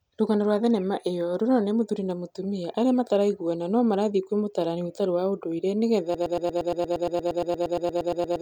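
Speech that, from 6.15 s to the end, stutters on a 0.12 s fragment repeated 20 times: a broken-record loop, likely a stalled player or stream resending its last buffer.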